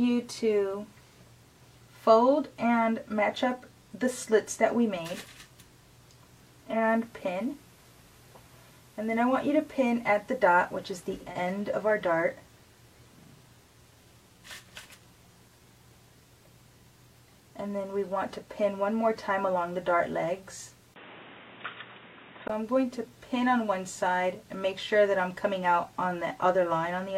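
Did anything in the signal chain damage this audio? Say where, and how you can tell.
Yes. From 6.67 to 11.39 s, the receiver's digital radio blended to analogue FM over 215 ms. A spectrogram shows a broadband hiss floor appearing about 35 dB below the signal, with the level unchanged.

At 20.94 s, a 20 ms gap precedes a narrower band, a noise floor roughly 30 dB down and a level shift of roughly 5 dB until 22.50 s. The likely cause is an input switched to a poorer device.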